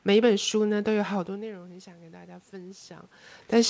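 A speech recording with automatic gain rising between 0.94 and 2.98 s. Around 1.0 s the talker seems to move away, and the level at the microphone falls by about 19 dB. The gain control reacts slowly. Over roughly two seconds it raises its gain by about 6 dB. The voice and the room noise swell together as it does. The talker comes back near 3.0 s. Nothing is heard above 8 kHz, which fits a G.722 call path.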